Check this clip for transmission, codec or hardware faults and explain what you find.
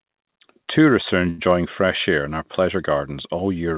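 One transmission fault stands out, heard over a G.711 mu-law call path that carries nothing above 4 kHz. From 1.30 to 1.40 s, just before "fresh air in our", there is a short stall from a late packet. The jitter buffer ran empty, so the receiver held the last sound for 83 ms and then resumed where it stopped. The sound drags with a slight buzz or dip. Unlike a lost packet, nothing is skipped. Everything afterwards simply arrives 83 ms later.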